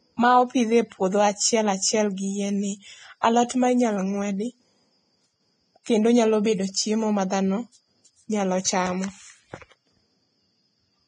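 A speech clip with heavy, grainy codec damage throughout. Nothing is present above 9.7 kHz. The treble sounds hissy and coarse. This is likely Vorbis compression at roughly 22 kbps. Pre-echo appears twice. A short hiss leads attacks from 3.21 to 3.23 s, after "achiel gi yien ni", and at 3.49 s, before "ma inyalo ng'wedi". Block-spread quantisation noise fills those brief gaps.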